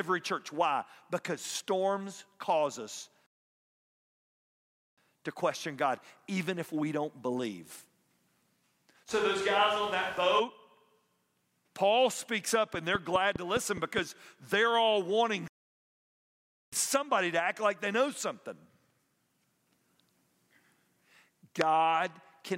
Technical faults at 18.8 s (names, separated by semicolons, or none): none